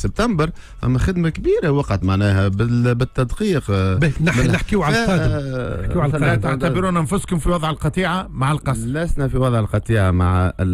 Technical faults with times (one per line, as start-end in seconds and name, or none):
5.57-10.73 channel delay (comb filtering)